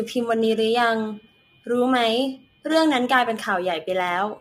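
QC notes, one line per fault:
Throughout, low-delay AAC compression: the speech sounds rough and grainy, with a hiss filling the gaps between the pitch harmonics and an upper band that sounds thinned and somewhat synthetic. The likely cause is a low-delay coder such as AAC-ELD, whose short frames of about 500 frequency lines cannot separate closely spaced harmonics cleanly and spend bits inefficiently. The damage is plainly audible and fits a bitrate around 32 kbps.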